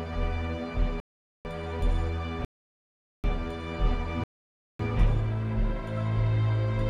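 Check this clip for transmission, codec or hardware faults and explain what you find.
Three rebuffering stalls, at 1.0 to 1.45 s, 2.45 to 3.24 s and 4.24 to 4.79 s. Each time the player runs dry, the sound drops to silence for 0.45, 0.79 and 0.56 s, then picks up exactly where it left off, adding time without losing any audio.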